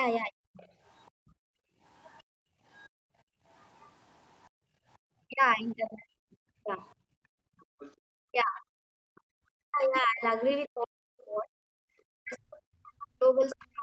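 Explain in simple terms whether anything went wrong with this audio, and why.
A few things went wrong, all tied to the call's echo canceller getting confused while both people were talking.

First, speech suppressed in double talk. Very briefly at 0.30 to 0.39 s, and then again from 5.29 s right to the end, the talker's voice dips sharply or gets chopped, sometimes nearly vanishing for a moment. The likely cause is that the other side was talking at the same time, and the canceller, unable to tell the talker apart from the loudspeaker echo, turned everything down together.

Second, the other side's voice leaking through. A faint second voice sits underneath from 0.54 to 5.74 s, comes back a bit more noticeably from 7.6 to 10.68 s, and pops up once more, fairly clearly, at 13.5 to 13.65 s. It's most likely the far end playing out of the talker's loudspeaker and sneaking back into the microphone because the canceller didn't scrub all of it out.

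Third, background gated by the echo canceller. Between 1.11 and 5.01 s, the room tone keeps dropping away, adding up to about 2 seconds of dips, and again between 7.08 and 9.35 s for about a second in total. That's the canceller clamping the microphone down hard while the loudspeaker was active, then letting the background back in once it relaxed.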